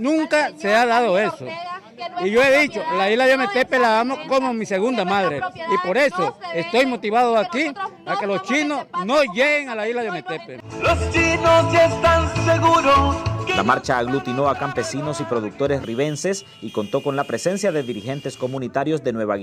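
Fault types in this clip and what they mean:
No audible faults turn up anywhere in this recording.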